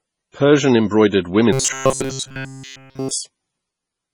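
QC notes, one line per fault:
throughout, MP3 compression: the speech has a heavy watery, swirling texture with smeared onsets, likely from MP3 encoding at a very low rate, around 24 kbps. Short of bits, the encoder cuts the treble and lets weak frequency lines flicker frame to frame.
1.53 to 3.11 s, robotic sound from repeated short buffers: the speech becomes a rigid metallic buzz at 133 Hz that loosely tracks the speech, likely because playback kept looping a snippet of about 7.5 ms while fresh audio was skipped. Across this span virtually all of the sound is repetition.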